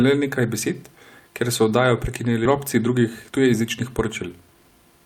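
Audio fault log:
2.45–2.47 s skip ahead: about a second of queued audio was discarded right after "besed ker so oddajo", so playback jumps forward with no gap, joining the two sides almost directly.
2.77–5.0 s jitter buffer speed-up: an overfull buffer was drained by repeatedly cutting short pitch-period pieces, about a fifth of a second in total, so speech runs 110% fast at unchanged pitch and sounds hurried.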